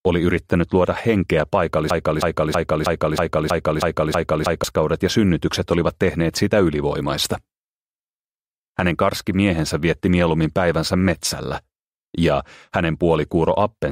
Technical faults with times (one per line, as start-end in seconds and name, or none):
1.90-4.64 broken-record loop